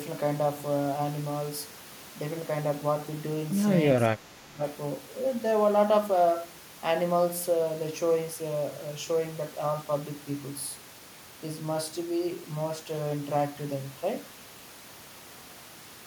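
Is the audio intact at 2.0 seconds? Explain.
Yes, the audio is intact at 2.0 seconds, with no dropout, glitch or other fault at that moment.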